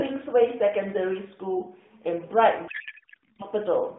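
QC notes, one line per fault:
2.68–3.43 s, codec payload misread: speech turns into garbled, warbling noise that barely tracks it, because octet-aligned AMR frames are decoded as bandwidth-efficient, so every field lands misplaced.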